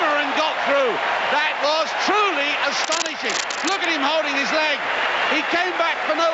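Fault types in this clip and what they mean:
gain pumping: Throughout the clip the gain swings by around 10 dB. Loud and soft passages end up closer together in level, and the sound comes across as squashed and breathing. The likely cause is input gain set far too high for the microphone, with a fast limiter or compressor pulling the level down on every peak and letting it recover in between.
cable scratch noise: From 2.84 to 3.85 s, dense, uneven bursts of scratching and rustling noise sit on top of the sound, at roughly the same level as the sound itself. This is likely a worn cable, connector or control being moved, its contact resistance changing rapidly and injecting noise into the signal. Like the rest of the audio, the noise stops at 8 kHz, where the call path cuts off the high frequencies.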